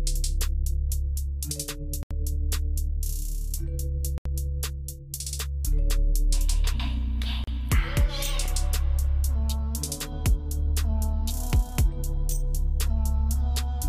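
Bluetooth stall at 2.03 to 2.11 s, 4.18 to 4.26 s and 7.44 to 7.47 s: the sound drops to silence for 77 ms, 75 ms and 35 ms, then resumes. Radio interference likely delayed packets until the headphones' buffer ran empty.

Block of digital silence at 8.46 s: a 0.73 ms stretch of zeros, which fits a 32-sample block, was played when the output buffer apparently wasn't filled in time. The abrupt cut and return produce a brief tick.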